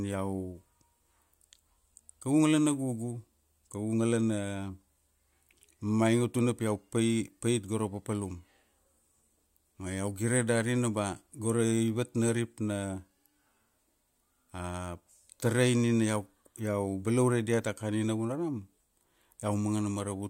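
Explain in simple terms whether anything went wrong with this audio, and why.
Nothing went wrong with this audio; there is no technical fault to hear anywhere in the recording.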